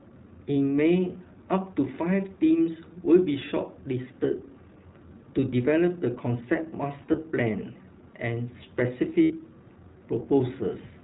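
Speech, coded throughout with the iLBC codec: the band stops at 4 kHz, so the sound is muffled and narrow, and the coding damage is plainly audible as a slightly rough, synthetic edge on the voice. The texture fits iLBC's 20 ms frame mode at a fairly high bitrate. There are two sets of lost iLBC frames. From 7.02 to 7.19 s, about 80 ms of audio is missing, scattered across roughly 160 ms in short gaps of around one frame each. Each gap is filled with a brief, slightly buzzy held sound from the last pitch cycle mixed with noise. From 9.22 to 9.32 s, about 80 ms of audio is lost and filled with a held, breathy vowel-like sound. In both places the voice returns cleanly right after the gap.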